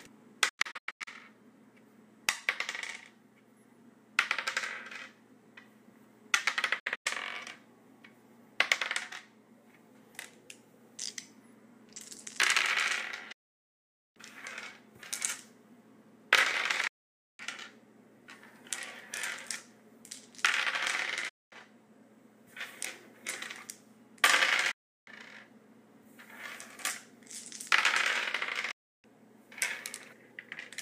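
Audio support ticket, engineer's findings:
Audio cuts to silence via a fast 8 ms fade, then resumes further on with material missing. Seven events: 0.49–1.08 s and 6.79–7.06 s (several short holes, longest 96 ms), 13.32–14.17 s, 16.87–17.40 s, 21.29–21.53 s, 24.71–25.08 s, 28.71–29.05 s. Digital broadcast dropout: receiver muting on lost or checksum-failed frames until clean frames return. Gap lengths step in 32 ms units, which fits 32 ms codec frames.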